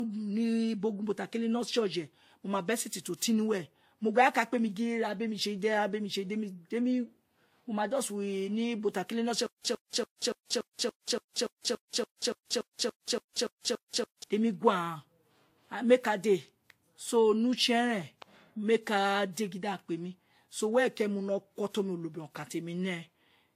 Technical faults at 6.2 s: transcoding between lossy codecs

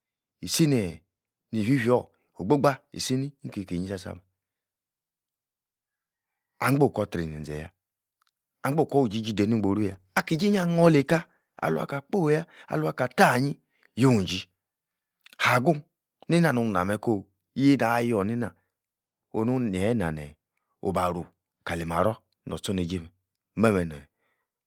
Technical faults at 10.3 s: call bitrate drop

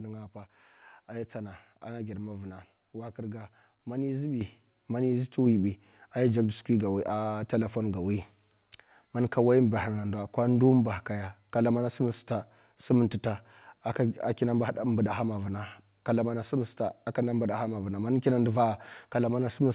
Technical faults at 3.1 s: none

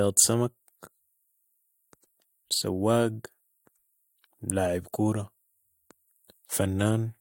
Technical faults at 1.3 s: none

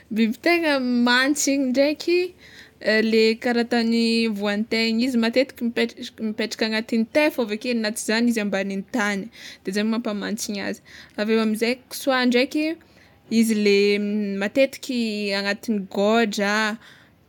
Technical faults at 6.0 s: none

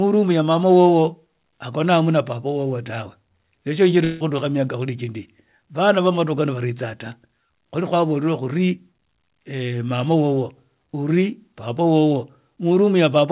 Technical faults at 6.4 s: none

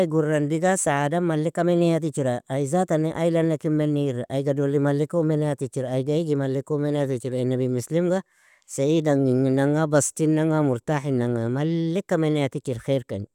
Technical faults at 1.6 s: none

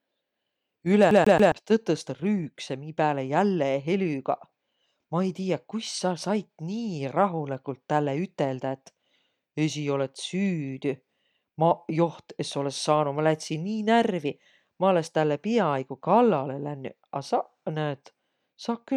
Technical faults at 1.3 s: CD stuck on one turn

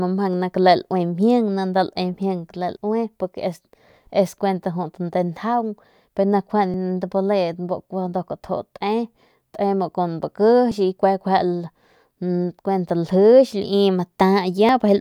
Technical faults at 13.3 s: none

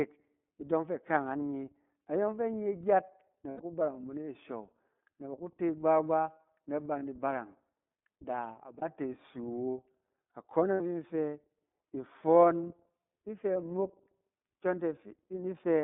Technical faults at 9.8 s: iLBC codec

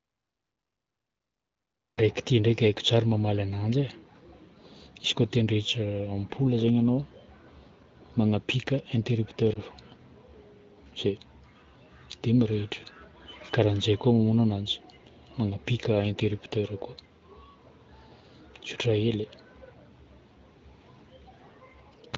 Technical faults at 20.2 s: none

